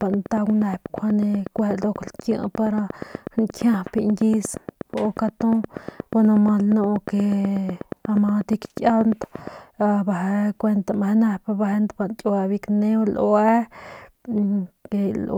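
A repeating pulse, likely from nearby equipment's interference or a faulty connection or power supply, injects a train of clicks from 0.02 s to 9.48 s: 8.36 per second, evenly spaced, roughly seventy in all, standing well above the speech and ticking through the pauses too.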